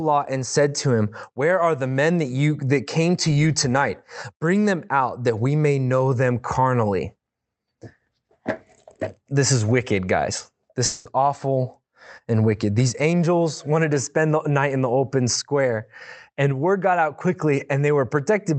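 A long network dropout from 10.85 to 11.07 s, likely lost packets, leaves the speech continuing as a fading synthetic buzz for about 0.2 s before it resumes, with that stretch gone, through the call codec's 8 kHz-limited sound.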